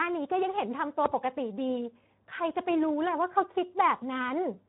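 Speech run through the Speex codec at a low setting, which fits a bitrate of about 11 kbps, leaves too few bits for the excitation, so throughout the clip the speech sounds plainly hoarse and noisy, with nothing above 3.9 kHz.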